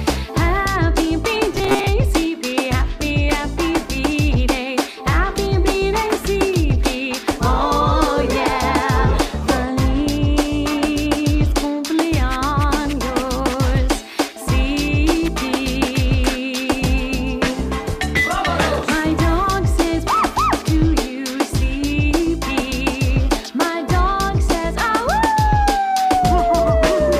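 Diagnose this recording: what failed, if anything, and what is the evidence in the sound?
From 1.52 to 1.88 s the sound turns into a rigid metallic buzz at 134 Hz: robotic sound from repeated short buffers. The failure is likely at the driver or buffer stage. Audio arrived too seldom, so a segment of about 7.5 ms was looped to fill the gaps, and roughly half of that stretch is repetition rather than real audio. A spectrogram would show an evenly spaced harmonic comb at multiples of 134 Hz, and the waveform would show identical 7.5 ms cycles repeating.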